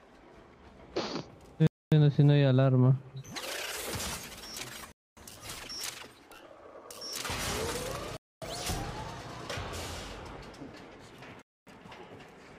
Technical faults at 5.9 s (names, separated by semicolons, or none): none